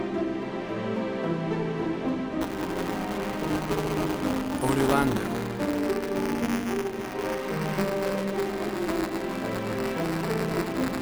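From 2.41 s to the end there's buffer tearing, a rough 188 Hz buzz, which fits a 256-sample buffer, where a small slice of each period replays audio from the previous lap.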